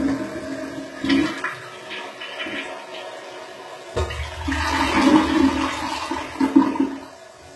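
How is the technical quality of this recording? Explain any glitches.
The technical quality is poor. Throughout the recording, the top end sounds bright but false, with a gritty, metallic sheen on the treble and nothing at all above 11.8 kHz. The likely cause is HE-AAC compression at a very low bitrate, around 16 kbps judging by how heavy the damage is. The codec stores only the lower spectrum and fakes the upper range by copying lower bands upward under a rough envelope. Those copied harmonics don't line up with the real ones, which is what makes the highs sound smeared and synthetic rather than natural.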